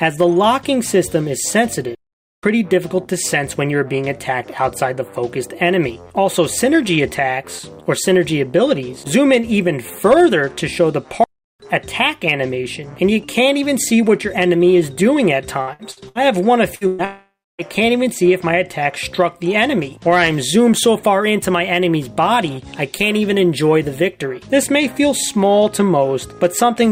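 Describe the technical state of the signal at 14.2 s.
At 14.2 s the signal is intact, with no audible technical fault at that point.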